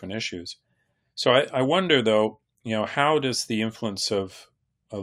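Speech recording with no technical faults to report.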